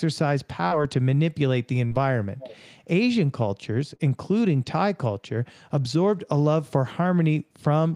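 At 0.67 to 0.74 s there's the first short concealed packet loss. Roughly 40 ms of the call didn't reach the decoder in time, so the receiver papered over the gap by extending the last bit of sound and then blending back into the real audio. You hear it as a quick smear or wobble, and the same thing happens again at 1.87 to 1.94 s.

From 2.38 to 2.57 s a faint delayed copy of the speech comes through, trailing the original by about 0.32 s and sitting roughly 20 dB below it. That's an echo leak, most likely from the far end playing the call on a loudspeaker, with its echo canceller letting some of what its microphone picked up slip back down the line. It's a quiet repeat rather than a full-strength double.

At 3.95 to 4.02 s there's one more short concealed packet loss, again about 40 ms patched over, giving the same brief smeared wobble as the earlier two.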